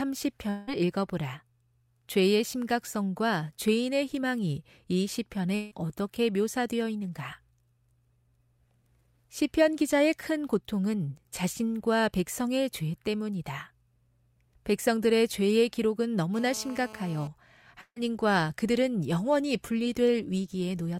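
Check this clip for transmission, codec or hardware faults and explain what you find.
Four faults are audible in this speech clip.

From 0.49 to 0.69 s and again from 5.55 to 5.73 s there are gaps that sound like a long network dropout. Each time the last sound is stretched into a fading buzz or hiss. Speech then returns further on. About 0.18 s and 0.16 s are missing. The likely cause is a stall in the incoming stream.

From 16.34 to 17.28 s there is GSM phone buzz. A nearby 2G phone in a call pulses about 217 times a second. The audio circuitry rectifies those pulses. The result is a harsh, steady raspy buzz at 217 Hz with many harmonics, about 19 dB below the speech.

At 17.81 to 17.98 s there is a burst of packet loss. About 160 ms of audio never arrived. The receiver held and faded the last sound, so there is a brief dying buzz or hiss, then silence. Speech resumes with that stretch gone.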